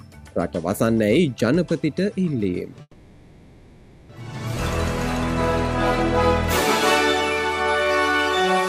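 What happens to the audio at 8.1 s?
At 8.1 s the audio is inside a jitter buffer slow-down running from 7.63 to 8.54 s. The receiver repeats single pitch periods to rebuild its reserve, adding 111 ms and playing at 89% speed with pitch unchanged, so sounds are drawn out, perhaps faintly warbling. A spectrogram shows harmonics stretched horizontally at constant frequency; the waveform shows near-identical repeated cycles.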